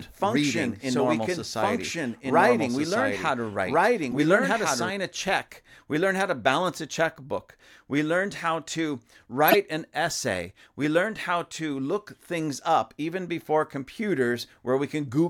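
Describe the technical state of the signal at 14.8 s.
At 14.8 s the speech signal is intact, with no audible technical fault at that moment.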